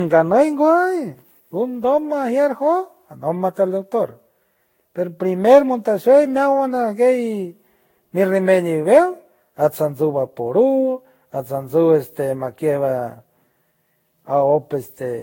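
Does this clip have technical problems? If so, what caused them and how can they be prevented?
Yes. Generation loss runs throughout: likely about seven Vorbis encodes near 60 kbit/s, each adding fresh quantisation noise, leave the speech hollow and swirly, with nothing above 16.6 kHz. Keep a lossless master and encode to a lossy format only once, at the final step.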